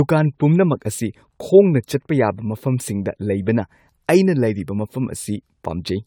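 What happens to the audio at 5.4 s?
At 5.4 s the speech carries generation loss, which runs through the whole clip rather than starting there. The sound is swirly and hollow, with smeared consonant attacks and a watery texture beyond what a single moderate-bitrate encode would give. The likely cause is the audio being decoded and re-encoded around five times, which fits an AAC chain at about 96 kbit/s. Each pass quantises on a shifted frame grid, so noise and spectral gaps build up. Bandwidth still reaches 20 kHz.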